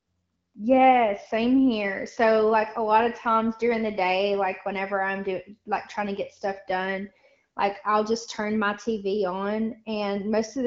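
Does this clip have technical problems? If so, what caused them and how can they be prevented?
No, the speech carries no technical faults; it has the sound of AMR wideband (HD Voice) coding at 12.65 kbit/s, with only light coding texture and no content above about 7.3 kHz, as expected from that codec's band limit.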